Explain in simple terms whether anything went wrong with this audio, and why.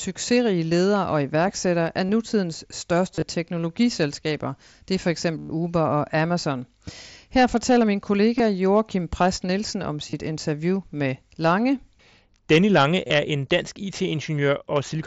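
Concealed Bluetooth headset packet loss: some sound packets travelling between the headset and the phone went missing, and the phone filled each gap by repeating a stretch of the sound that came just before it. The result is a brief buzzy, held tone at 2.07–2.09 s (after "ledere og iværksættere af"), 3.15–3.22 s, 5.38–5.50 s (the longest), 8.38 s (after "fortæller min"), 10.10–10.13 s (before "interview med") and 13.08–13.10 s.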